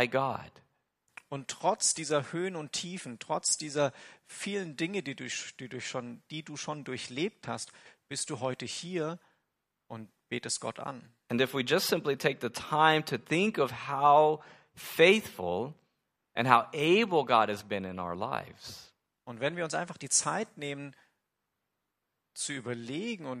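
A speech recording with no technical faults to report. Nothing in the signal chain stands out as broken at any point in the recording.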